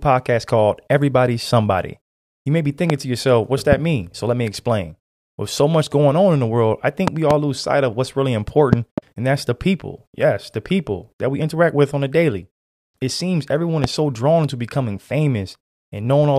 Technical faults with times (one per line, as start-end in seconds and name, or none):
2.90-2.92 loud pop
3.72-3.75 loud pop
7.08-7.33 loud pop
8.73-9.00 loud pop
13.84-13.87 loud pop